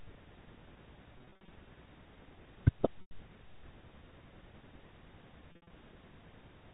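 Packet loss with pitch repetition occurs at 1.18–1.48 s, 3.01–3.11 s and 5.52–5.70 s. The decoder loops the last pitch period across the gaps, so the telephone-band speech turns briefly buzzy and held at 1.18 s and 5.52 s, while the longer gap at 3.01 s fades into silence before the speech returns with a short cross-fade. A spectrogram shows frozen, evenly spaced harmonic stripes, and the waveform shows identical repeated cycles.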